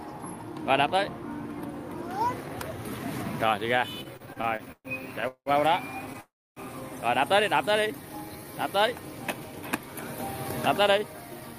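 From 4.03 to 5.49 s the audio shows repeated stalls, a stutter. It halts eleven times in about a second and a half. Each gap is bridged by stretching the last sound, and the longest wait lasts 186 ms. In all, 468 ms is filled this way, nearly a third of that span. Nothing is lost. Packets were arriving late, so the jitter buffer kept running dry. The result drags and judders.

At 6.20 s comes a call audio freeze lasting until 6.60 s. The last sound carries on briefly, then fades. About 290 ms of that stretch is silence. The audio then resumes exactly where it stopped, so 361 ms has been inserted and nothing is skipped. The cause is likely packets held up in transit, emptying the jitter buffer. Everything after this point runs later by that amount.

Between 7.72 and 8.68 s there is a jitter buffer slow-down. The audio plays at 88 percent speed, but the pitch stays the same. The receiver repeated tiny pieces, single pitch periods or slices of pauses, over and over. 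This added 122 ms. The aim was to rebuild a reserve in a buffer that was running low. Sounds come out drawn-out and slightly sluggish.

From 10.81 to 11.55 s a jitter buffer speed-up takes place. The audio runs at 114 percent speed at unchanged pitch. The receiver cut out short pieces, one or a few pitch periods at a time, many times in a row. Together these removed roughly a tenth of a second. The buffer had built up more audio than it targets, and this trimmed the excess delay. The passage sounds hurried.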